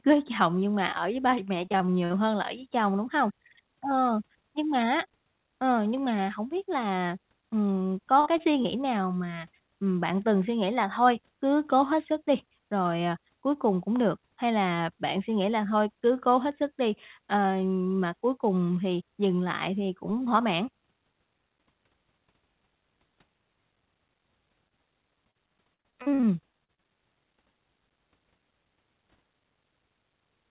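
From 1.3 to 2.19 s, between "nhưng mà ở với" and "hơn là ở với", repeated packet loss (robotic sound) breaks the speech into choppy fragments with pieces missing. Nine short gaps, the longest 19 ms and about 140 ms in all, are each patched by extending the previous sound.

At 8.20 to 8.28 s, right after "biết là ừm có", a burst of packet loss removes about 60 ms. The receiver extends the last sound and fades it down, then playback resumes further on with that stretch missing.

Two short concealed packet losses follow, at 8.38 to 8.41 s and at 8.63 to 8.67 s, the second just before "nào mà ừm bạn". Each drops about 20 ms and is filled from the preceding audio, heard as a brief smear or wobble.

From 24.69 to 26.87 s, repeated packet loss (robotic sound) returns more heavily. Eleven gaps, the longest 46 ms and about 360 ms in total, give a sustained robotic, stuttering quality. Throughout, the call path passes nothing above 4 kHz, which fits a G.711 mu-law codec.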